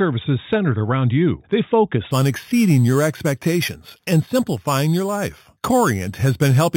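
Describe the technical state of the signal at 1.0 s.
At 1.0 s the speech signal is intact, with no audible fault at that moment.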